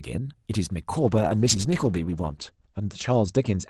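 At 0.99 s a call bitrate drop sets in and lasts to the end. The sound fits the Opus encoder in this call falling from around 40 kbps to about 10 kbps. The network's bandwidth estimate fell, so the encoder got far fewer bits. Speech turns rougher and more watery. The top end narrows from 12 kHz to 8 kHz, so sibilants dull. The worst stretch holds for about 1.3 s. It never recovers before the clip ends.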